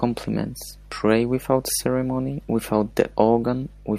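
Speech with mains hum throughout: a steady 50 Hz tone, with low harmonics, sits about 25 dB below the voice, from a ground loop or nearby transformer. Unlike rumble or handling noise, it holds one fixed pitch and never fluctuates with the speech.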